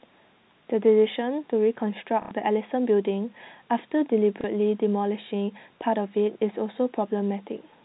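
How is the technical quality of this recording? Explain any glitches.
Two brief dropouts spoil the recording. The sound is telephone-band G.711 audio with nothing above 4 kHz.

Packet loss with last packet repeated occurs from 2.22 to 2.31 s, lasting 90 ms, and again from 4.41 to 4.44 s, lasting 30 ms. Packets went missing, so the receiver replayed the last one to fill the gap. The first gap fits three repeated 30 ms packets. The first gap gives a robotic stutter and the second a small blip.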